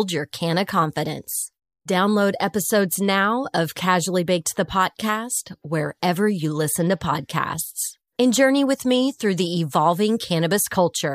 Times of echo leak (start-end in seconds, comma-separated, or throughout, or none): none